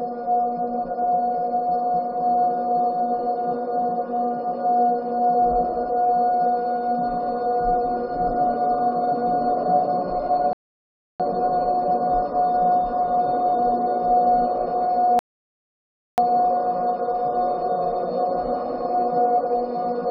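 At 10.53 s and again at 15.19 s there's a rebuffering stall: playback runs dry, goes silent for 0.67 s and 0.99 s, then resumes exactly where it stopped.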